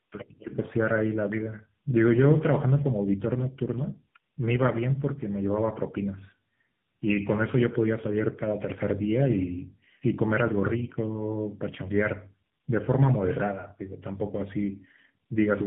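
Throughout, tandem speech coding: two speech codecs in series, fitting GSM then AMR-NB, each recoding the other's damage, leave it rough, muffled and warbly, with a spectrogram empty above 3.8 kHz.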